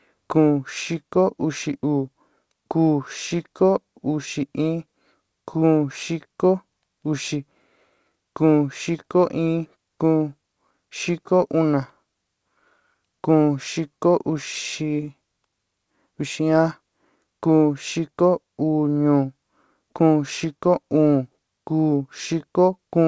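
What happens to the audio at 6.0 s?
At 6.0 s the speech is intact, carried cleanly through the call path with its G.722 coding and nothing above 8 kHz, and no fault occurs at that moment.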